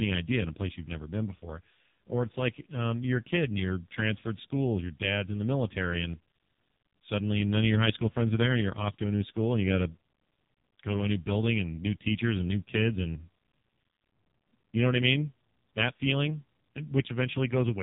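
From start to finish the speech passes through the AMR narrowband mobile codec, with heavy codec damage. Nothing above 3.8 kHz survives, and the voice sounds buzzy and synthetic. At this rate the codec rebuilds each 20 ms frame from a vocal-tract model and a few pulses, which points to one of its lowest modes, around 5 kbps. Plain band-limiting would sound dull but clean, whereas this clip has a coarse, artificial buzz.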